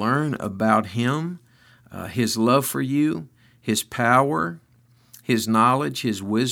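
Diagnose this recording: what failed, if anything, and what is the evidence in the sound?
Nothing in the signal chain appears to have failed, and the speech signal stays continuous and steady across the whole recording, with no audible disturbance from any stage.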